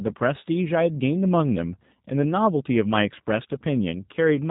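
G.729 codec coding runs through the whole speech clip, with damage that is plainly audible. Each 10 ms frame is rebuilt from a vocal tract filter, a pitch predictor and a few pulses, which fits an 8 kbit/s G.729A stream. Nothing above 3.8 kHz survives, and the voice sounds rough and synthetic.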